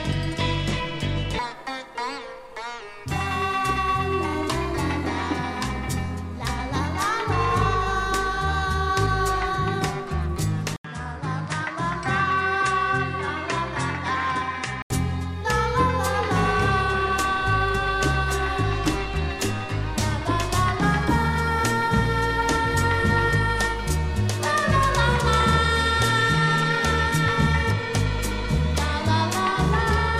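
At 10.76 s the input likely switched to a poorer device: after an 80 ms gap the sound loses everything above 10.5 kHz and turns duller until 14.90 s.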